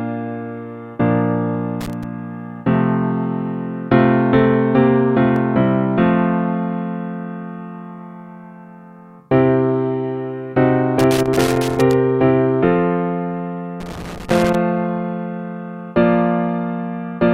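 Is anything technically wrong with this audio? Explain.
Yes, there are two faults. Loose connector crackle appears from 1.81 to 2.04 s, 10.99 to 11.93 s and 13.80 to 14.55 s. A worn contact shifting and momentarily breaking chops the signal, giving irregular, scratchy bursts that last a quarter to nearly a full second, unlike brief, evenly spaced skips.

Audio missing between chunks is heard at 5.36 and 11.34 s as instant jumps, each dropping around 20 ms with the edges butted together. The cause is likely a processor working in 6-second chunks and losing a sliver at each handover, hence the exact regular spacing and single-point skips rather than sustained crackle.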